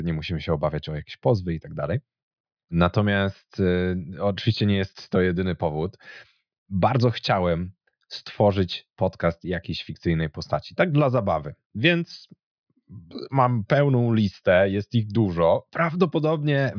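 No technical faults can be heard anywhere in the recording, and the signal stays steady and continuous throughout the speech.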